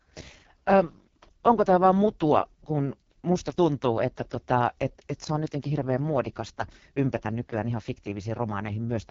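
The speech sounds rough and raspy from start to finish, with a buzzy, smeared texture and no detail above about 7.5 kHz. This is heavy AMR wideband (HD Voice) codec damage, consistent with its lowest 6.6 kbit/s mode, where the pulse-driven vocal tract model runs out of bits.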